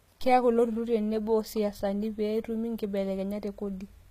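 A speech recording that carries HE-AAC compression damage from start to finish, plainly audible, with nothing above 14.9 kHz. Unlike an ordinary low-bitrate codec that simply dulls the top end, the treble here stays bright but sounds synthetic: its upper band is likely rebuilt by copying lower bands upward, so harmonics fail to line up and sibilants turn gritty and metallic, which fits a very low bitrate of around 20 kbps.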